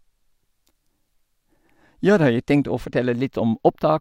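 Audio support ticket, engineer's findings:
Channels drifting apart, throughout the speech. Left and right captured on separately clocked devices, roughly 20 ppm mismatch, so inter-channel delay grows steadily to roughly 0.07 ms by the end. Mono sum: comb notches sweep slowly down from the top of the band into the upper treble. Heard as slow flanging on the speech. Probable component: dual-device capture without shared word clock or sample-rate conversion.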